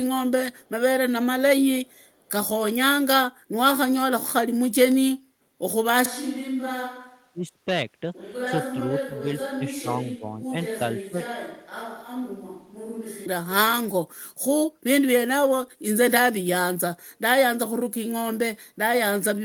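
A speech recording with three kinds of fault. At 0.53–0.69 s and again at 1.87–2.3 s a very faint delayed copy of the voice trails the talker by 446 ms, sitting roughly 40 dB under the speech. This is an echo leak, likely where the far end's loudspeaker output got past its echo canceller and was sent back. From 6.06 s to 13.26 s the voice suddenly turns roomy and hollow, loses bass, drops by around 10 dB and carries more background noise, then snaps back. That points to a switch to a distant microphone, with the close microphone's signal lost. Inside that stretch, at 7.33–7.66 s, 8.89–9.64 s, 9.82–10.53 s and 11.05–11.2 s, the voice dips or partly cuts out, by as much as about 25 dB at the deepest. This is speech suppressed in double talk: the echo canceller, likely unable to separate the talker from loudspeaker echo while both sides spoke, turned everything down.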